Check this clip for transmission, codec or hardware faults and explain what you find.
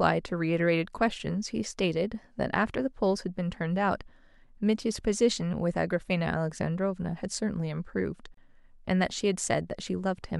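There is one fault, a gap at a join of encoded pieces. At 8.34 s the speech drops into silence for about 30 ms, then resumes where it stopped. The audio was encoded in separate pieces, here every 10 s, and joined untrimmed. Encoder start delay and final-frame padding remain, creating this brief hole with smeared edges.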